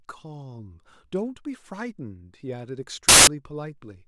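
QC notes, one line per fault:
3.09 to 3.27 s, samples built from the wrong bytes: for about 0.19 s the reader stitches each sample's bytes together wrongly, so the jittery low bits land in the top of every value. The speech turns into a loud burst of harsh broadband noise.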